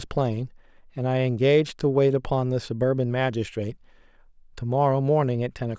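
There are no technical faults to describe in time order in this speech clip.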